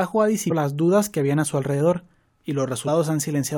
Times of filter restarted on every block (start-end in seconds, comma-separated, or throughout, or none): none